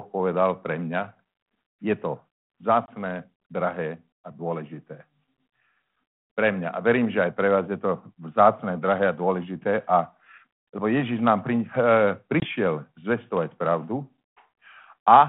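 Speech over a narrowband ADPCM line shows packet loss on an ADPCM call at 2.86 to 2.89 s, just before "drahé a dôležité", and at 12.40 to 12.47 s. Each is a hard-edged 20 ms silent hole, about one packet. Unlike a plain dropout, the sound returns slightly distorted, because the decoder's predictor and step size must resynchronise.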